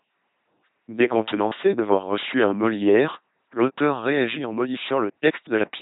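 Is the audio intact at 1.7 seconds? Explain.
No. At 1.7 seconds, as everywhere else in the clip, the speech passes through an LPC-10 vocoder. Each short frame is rebuilt by a ten-pole vocal tract filter driven by either a buzzing pulse train or noise, never a mixture, so the voice turns mechanical and robotic, with stray buzz or hiss wherever the voiced or unvoiced choice goes wrong. The damage is heavy, nothing survives above 3.9 kHz, and the sound fits a 2.4 kbit/s coder.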